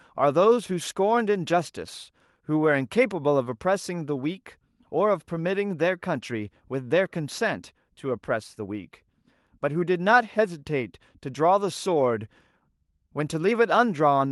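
Clock drift between sender and receiver runs through the whole recording. The sending clock runs roughly 4 percent fast, so the jitter buffer keeps filling faster than playback empties it, and the receiver has to throw audio away to keep pace with the speech.

Repeated timing corrections follow from that, from 0.23 s to 14.08 s. The receiver keeps trimming short pieces, always in the same direction but at uneven spacing, so the speech plays at about 104 percent speed.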